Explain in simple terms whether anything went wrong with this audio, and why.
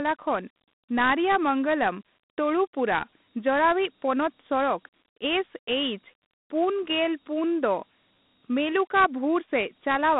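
The speech carries Dialogic VOX ADPCM damage from start to end. This old phone-system format stores each sample very coarsely, so a gritty hiss trails the speech. The sound is also squeezed into a phone line's range, with nothing above 3.9 kHz.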